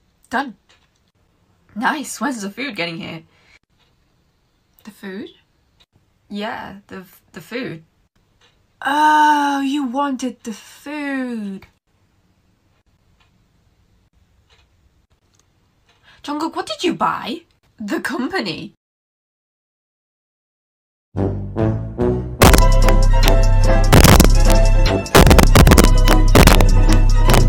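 Integer overflow cracks at 22.42–22.89, 23.28, 23.93–24.52, 25.15–26.93 and 27.30–27.38 s: peaks up to about 4 dB over full scale wrap to opposite sign, sharper than clipping.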